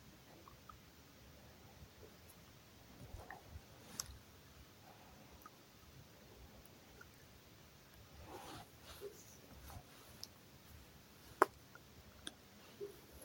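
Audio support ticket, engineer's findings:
Gritty crackle and tearing on the speech, 7.18 to 7.78 s. Processor overload crackle: CPU missing audio buffer deadlines in a row, around twenty, each skipped, leaving hard-edged gaps. Consistent with a buffer of a few milliseconds. Clears once load drops.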